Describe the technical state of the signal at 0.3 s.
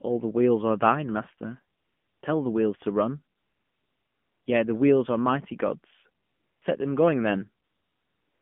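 At 0.3 s the speech sounds thin, boxy and buzzy, with a synthetic edge, confined to roughly 150 Hz to 3.4 kHz. This is AMR narrowband mobile codec damage, present across the whole clip. The codec samples at 8 kHz and rebuilds the voice from a vocal-tract model driven by a handful of pulses per 5 ms subframe, so nothing above 4 kHz survives, and the plainly audible buzziness fits a low rate near 7.4 kbps.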